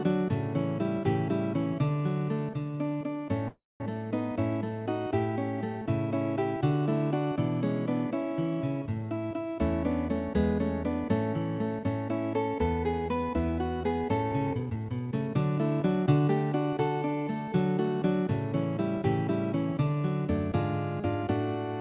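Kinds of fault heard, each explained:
Call audio freeze: from 3.48 s to 3.83 s the sound stops being fed and the last fragment is stretched into a fading buzz, then about 0.2 s of silence. Afterwards it resumes where it left off, with nothing lost. This is likely packets held up in transit until the jitter buffer ran dry.
Jitter buffer speed-up: from 14.32 s to 15.38 s and again from 15.81 s to 16.29 s the audio hurries at unchanged pitch, at 123% and then 110% speed. The receiver is trimming short pitch-period slices to drain excess buffered delay, roughly 0.3 s and then a few hundredths of a second.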